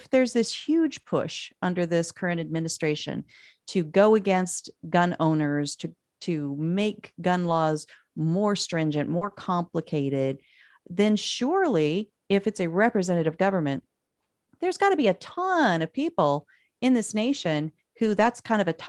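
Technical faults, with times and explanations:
0.85–0.99 s, 1.05–1.11 s, 2.29–2.51 s, 7.43–7.53 s, 9.21–9.35 s, 13.17–13.23 s, 18.05–18.27 s: lost packets rebuilt from error correction. There's no gap, but for 40 to 120 ms at a time the speech turns rougher and grainier. The decoder is playing the low-bitrate backup copy carried in the next packet, not the real audio.
1.01–1.05 s and 9.17–9.23 s: short concealed packet losses. Here there was no backup, so the receiver extended the previous sound for 20 ms and then 40 ms before fading back into the real signal. You hear a quick smear or wobble right next to the rebuilt stretches.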